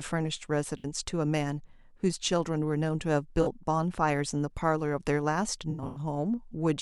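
Speech with AAC frame loss and concealment at 0.78–0.85 s, 3.42–3.47 s and 5.70–5.99 s. The decoder reuses the last good spectrum across gaps of 64 ms, 43 ms and 192 ms, giving smeared, noisy or phasey patches. A spectrogram shows blurred, held bands, and the longest run lasts about 100 ms.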